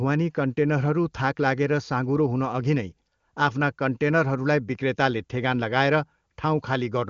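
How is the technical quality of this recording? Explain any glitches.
No glitches are audible.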